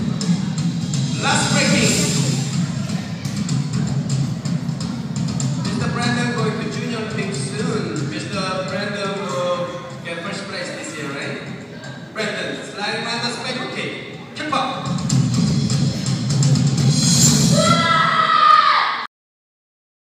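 Cut-off end at 19.06 s: the final buffers were never written out, so the sound is chopped off mid-event and falls straight to digital silence with no natural decay, staying silent for the remaining second or so.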